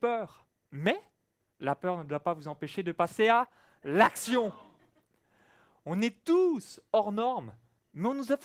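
Nothing stood out on listening to this speech clip.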